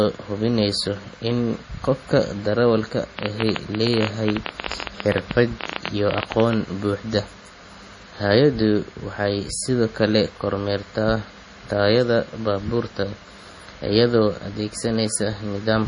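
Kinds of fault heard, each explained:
MP3 compression: The encoder was likely starved of bits, in a way that fits a rate near 32 kbps. It cut everything above 10.6 kHz and dropped weak frequency lines frame by frame, leaving the speech dull, watery and swirly, with heavily smeared attacks.
Train of clicks: Something kept injecting short pulses, likely interference or a faulty connection. From 3.19 to 6.54 s the result is irregular ticking at about 14 clicks per second, some fifty in all, standing out roughly 15 dB above the speech.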